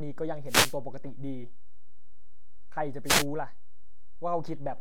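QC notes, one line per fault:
Throughout: DC offset, the whole speech waveform sits shifted from zero by about -30 dBFS, inaudible itself but eating headroom and adding steady energy at 0 Hz.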